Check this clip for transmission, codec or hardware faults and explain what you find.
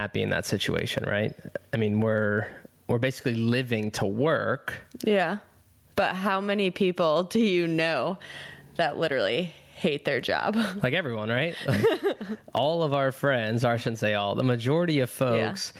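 There is one fault, gain pumping, running through the whole speech recording. The level swings by around 20 dB. The likely cause is input gain set far too high, with a fast limiter or compressor clamping it on every peak, which squashes loud and quiet passages toward the same level.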